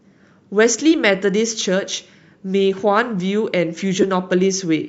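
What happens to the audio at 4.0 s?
At 4.02 to 4.04 s the speech turns briefly into a short noisy smear, the sign of lost LE Audio frames. About 15 ms of audio went missing, which fits two 7.5 ms frames, and the LC3 decoder filled the hole by replaying the last good spectrum with randomised signs. That is what sets it apart from a plain dropout: there is no silent gap or hard click, just a rough hiss-like blur carrying the previous sound's tone colour.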